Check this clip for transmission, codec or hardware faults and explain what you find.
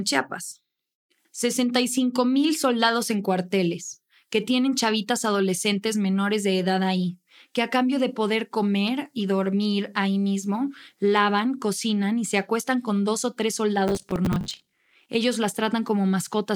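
One fault: processor overload crackle from 13.88 to 15.09 s. The processor repeatedly missed its deadlines for short buffers, around 10 ms each, and dozens of late buffers were filled with stale audio. The result is a gritty, tearing crackle over the speech that stops once the load eases. Unlike random network dropouts, these hard-edged glitches arrive densely over a short stretch.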